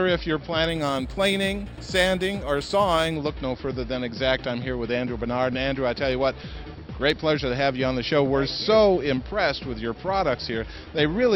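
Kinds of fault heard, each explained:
Imaging from linear upsampling: From 0.69 to 3.16 s the sound's rate was raised by joining samples with straight lines, a weak anti-imaging filter. The top of the original band sounds dulled. A mirrored copy of the spectrum sits between 6 and 12 kHz, roughly 25 dB below the signal. That gap fits a move from 12 kHz to 48 kHz. The copy adds a faint metallic shimmer above the true highs.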